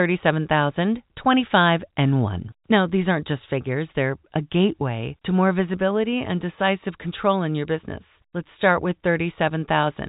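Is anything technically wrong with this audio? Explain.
No, this speech sits within the narrow band of G.711 A-law telephone coding at 64 kbps, with nothing above 4 kHz and only the faint, level-following quantisation hiss that the format always carries.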